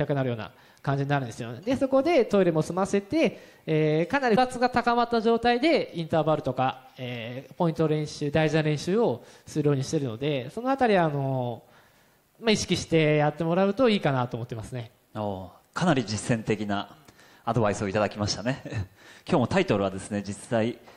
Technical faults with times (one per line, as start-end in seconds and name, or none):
4.32-4.38 damaged data in a compressed stream